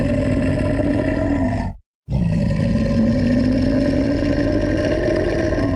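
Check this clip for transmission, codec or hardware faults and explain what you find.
No faults found: the everyday sound comes through the call path with only the ordinary coding character of a call codec and a top end that stops around 12 kHz, which fits Opus at a modest call bitrate.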